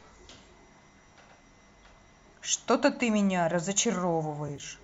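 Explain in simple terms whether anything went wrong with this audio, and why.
Near the end, between 4.48 and 4.63 s, some AAC audio frames went missing, which is AAC frame loss with concealment. The decoder patched the short gaps by guessing from the sound just before, so that stretch comes out briefly smeared and noisy.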